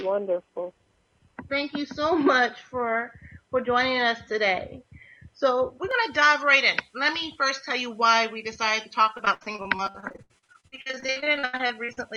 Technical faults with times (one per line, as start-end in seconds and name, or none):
5.91-12.17 pre-emphasis left on
9.17-11.99 repeated packet loss (robotic sound)